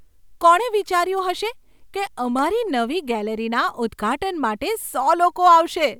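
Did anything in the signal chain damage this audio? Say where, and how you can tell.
Yes. At 2.39 s, right after "હશે કે", a sharp snap peaking around -20 dBFS is an electrical switching spike, likely a nearby arc picked up in analogue wiring. It shows as a narrow waveform spike and a thin broadband vertical line on a spectrogram.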